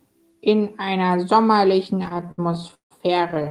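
From 2.03 to 2.93 s, then from 3.29 s to the end, repeated stalls (stutter) break up the speech. Late packets drain the jitter buffer, so the receiver stretches the last sound, fading it through stretches of up to 163 ms. Unlike dropouts, nothing is lost; the audio drags.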